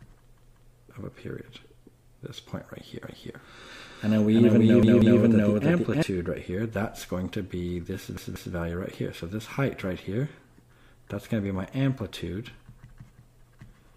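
At 0.37 s the playback device ran out of fresh audio and played its last buffer again, a repeated buffer fault. A piece about 186 ms long, which fits an 8192-sample buffer, sounds three times in a row up to 0.74 s, with a hard join at each repeat. The result is a short stutter, and the sound then carries on with nothing apparently skipped.

From 3.04 s to 6.03 s a doubled audio track appears. The likely cause is the same signal being mixed in a second time through a slower path. A full-band copy trails the original by about 300 ms at roughly the same level, with no decay or room colour. It switches on and off abruptly at those points, so everything in that stretch sounds twice.

Inside that stretch, at 4.83 s to 5.20 s, the same repeated buffer stutter recurs, with the 186 ms piece played three times. It is heard over the doubled copy.

At 8.17 s to 8.55 s the repeated buffer fault happens a third time. 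The same three-fold repeat with hard joins again produces a short stutter.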